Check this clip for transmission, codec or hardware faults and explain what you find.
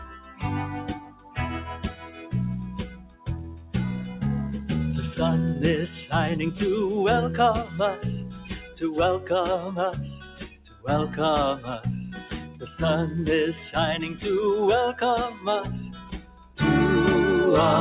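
The main fault is processing rather than transmission: a speech noise suppressor is working on non-speech sound, with a separate cut-off at 4 kHz from the call path.

Noise suppressor applied to music or sounds, throughout: the level pumps and thins by about 10 dB. The suppressor treats sustained sound and tails as noise and pulls them down.

Sound cut by the noise suppressor, at 0.0–2.33 s (about 12 dB), 2.86–3.74 s (about 14 dB), 7.65–9.3 s (about 8 dB), 9.98–10.88 s (about 14 dB), 11.57–12.65 s (about 11 dB) and 15.31–16.57 s (about 14 dB): held sound sinks and decays are clipped short, because the suppressor mistakes them for noise.

The lack of anything above 4 kHz comes from the call path, and the band limit fits G.711 mu-law at 64 kbps.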